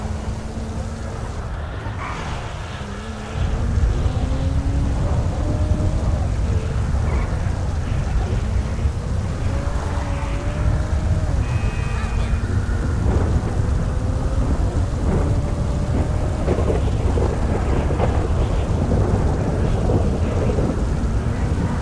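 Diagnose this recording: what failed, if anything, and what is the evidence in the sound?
Nothing failed in this recording, and there is no fault evidence to be heard in the sound.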